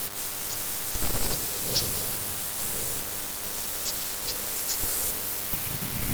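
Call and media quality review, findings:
DECT cordless phone buzz, throughout. Thin, steady 100 Hz buzz with dense harmonics under the speech, roughly 15 dB below it. Nearby DECT handset or base transmitting 100 bursts a second; audio front end rectifying the RF into the signal path.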